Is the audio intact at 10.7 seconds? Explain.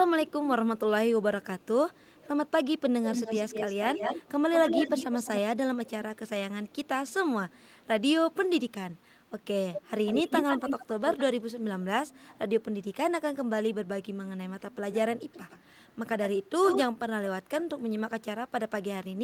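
No. From 9.73 to 11.23 s there is an echo leak: a copy of the speech returns about 150 ms late, roughly 5 dB below it. The likely cause is a loudspeaker-fed microphone whose echo canceller let that playback back through.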